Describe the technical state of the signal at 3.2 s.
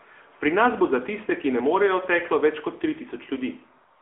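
At 3.2 s the speech sounds thin, boxed-in and plainly buzzy, confined to about 300 Hz to 3.4 kHz with nothing above 3.6 kHz. This is the AMR narrowband mobile codec, present throughout: its pulse-driven vocal-tract model adds the synthetic edge, which fits a 10.2 kbps mode.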